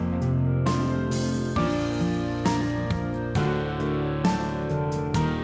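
No technical faults can be heard anywhere in it.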